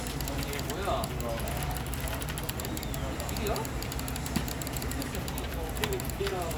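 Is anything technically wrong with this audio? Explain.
No technical faults are audible.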